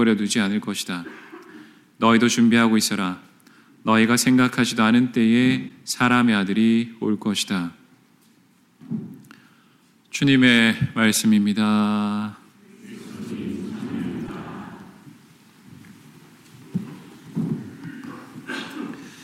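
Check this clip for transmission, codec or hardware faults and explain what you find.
Two short hits of damaged data in a compressed stream, at 5.65 to 5.71 s and 14.25 to 14.30 s. Corrupted bytes throw the decoder off sync until it finds the next frame header, leaving a brief blip about 50 ms long each time.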